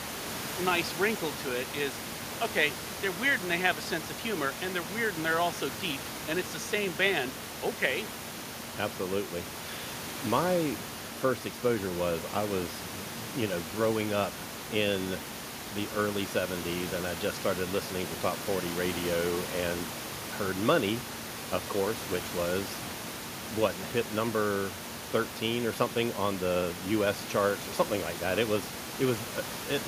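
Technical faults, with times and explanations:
No technical faults can be heard anywhere in this recording.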